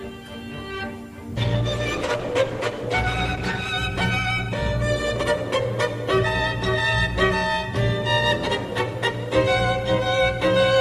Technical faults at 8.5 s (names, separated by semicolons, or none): none